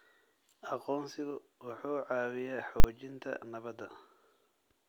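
At 2.80 s a single hard bang cuts through the speech. This is invalid numbers at full scale: a calculation produced invalid values, pinning the output at maximum for 40 ms.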